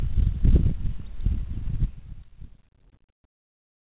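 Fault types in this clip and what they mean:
Truncation distortion on a fade: the fade-out is requantized without dither at a resolution that fits roughly 9 bits, so from 1.70 s the decaying waveform collapses into coarse steps, turning gritty, worst from 2.11 s to the end, within the 4 kHz call band.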